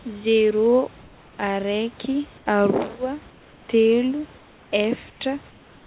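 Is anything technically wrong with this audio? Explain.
Yes. Comfort noise replaces the background in the pauses at 1.02–1.38, 2.38–2.46, 3.3–3.68, 4.38–4.72, 5.1–5.2 and 5.5 s to the end. There the real room noise turns into a smooth, featureless hiss, about 2 to 4 dB quieter. This likely comes from discontinuous transmission, where the receiver synthesises filler noise during the silences. The sound carries nothing above 4 kHz, which points to a narrowband call codec.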